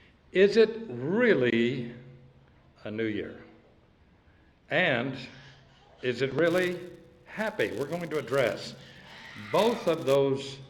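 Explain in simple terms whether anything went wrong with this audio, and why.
From 6.46 to 10.16 seconds, the filter restarted on every block, resetting 200 times a second, which adds a steady buzz that rises and falls with loudness.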